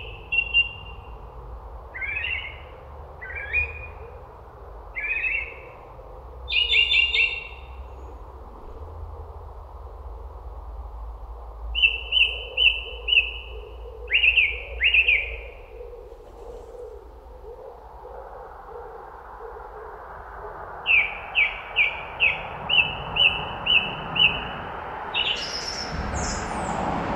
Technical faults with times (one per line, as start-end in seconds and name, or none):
none